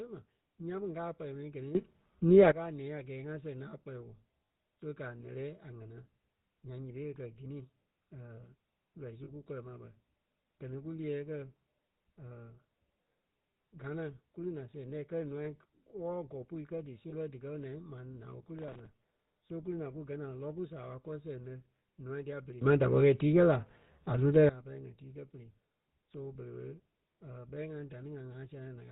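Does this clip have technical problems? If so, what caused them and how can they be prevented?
Yes. The GSM full-rate codec runs through the whole recording. At about 13 kbps it rebuilds the speech from a vocal-tract model driven by sparse pulses and passes nothing above 4 kHz, so the speech sounds buzzy and gravelly. That is a steady timbre, not brief events. Using a wideband codec prevents it.

A sudden gain jump raises the level by about 15 dB from 1.75 to 2.52 s and by about 18 dB from 22.61 to 24.49 s. The background noise rises in the same instant, which separates this from compressor pumping, where the level changes smoothly. The likely cause is a gain setting or bit shift applied without a ramp. Ramping every gain change over a few milliseconds prevents it.

Lost GSM frames occur at 4.49 s after "lɛ́ a kpɛlɛɛ woo", at 9.24–9.30 s between "lɔii su" and "kú kɔlɔ ma bɛ", at 15.44–15.48 s and at 17.10–17.15 s. 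They cover 40, 40, 20 and 20 ms. The settings of the last good frame are repeated, giving a short metallic ring rather than a silent dropout. Stronger channel protection or better concealment prevents it.

Processor overload crackle runs from 18.59 to 18.86 s, after "ma naa ɓé kú". Many audio deadlines are missed in a row, and each miss replays old audio with hard edges. The pattern fits buffers of roughly 3 ms, with around fifteen missed. The result is gritty tearing, unlike the held metallic ring of lost frames. Larger buffers or a lighter processing load prevent it.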